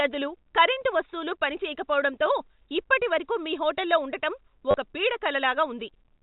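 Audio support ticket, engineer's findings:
Packet loss with last packet repeated, 4.71 to 4.74 s, just after "ఇప్పటివరకు మీ హోటల్లో ఉండటం". Short robotic stutter, about 30 ms. Probable component: receiver jitter buffer / concealment. Lost packets were filled by replaying the last one. The run buzzes at about 100 Hz, which fits 10 ms packets. Spectrogram: frozen harmonics. Waveform: identical repeated segments. Telephone band limit at 4 kHz from G.711 A-law visible above.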